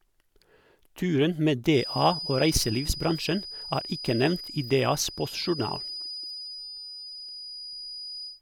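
A speech recording with a feedback whistle running from 1.68 s to the end of the clip. A thin, steady tone at 4.9 kHz sits roughly 15 dB below the speech, swelling and fading slowly in level but never building up. This is likely a loudspeaker-to-microphone loop held just at the edge of feedback, so a single frequency keeps ringing without running away into a full howl.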